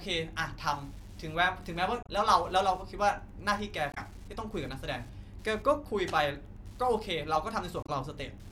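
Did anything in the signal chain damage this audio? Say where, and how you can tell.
Yes. Wi-Fi interference enters at the analogue wiring. A faint tick repeats every 102.4 ms, about ten times a second, all through the speech and well below it. A nearby radio's beacon bursts are rectified by the circuit and leak into the audio.

Damaged data in a compressed stream shows at the codec stage. Short glitches sit at 2.03 to 2.09 s, 3.91 to 3.98 s and 7.83 to 7.90 s. Each lasts about 70 ms. Corrupt bytes made the decoder misread frames and briefly lose sync.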